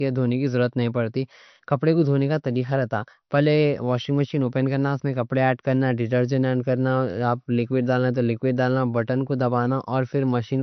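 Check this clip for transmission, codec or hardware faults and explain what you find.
One codec fault runs through the whole speech clip: low-bitrate audio saved at a high bitrate. The speech was likely squeezed through a low-rate MP3 encode first, then re-saved at a high rate. Nothing survives above about 6.1 kHz, so it sounds dull and band-limited, and the re-encode cannot restore what was lost.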